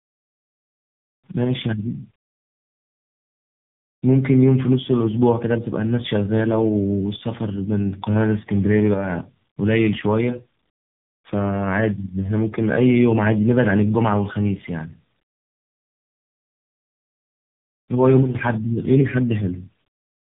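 Tandem speech coding throughout: the speech sounds rough, muffled and warbly, as if re-coded by three speech codecs in turn, with nothing above 3.8 kHz.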